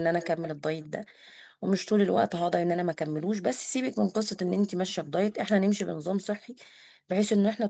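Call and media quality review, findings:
Echo leak, 0.2–0.49 s, 0.81–0.88 s, 5.31–5.35 s. Far-end loudspeaker echo canceller, likely, letting residual pickup back. Delayed copy of the speech about 218 ms behind, roughly 15 dB down in the first event, faint in the later two.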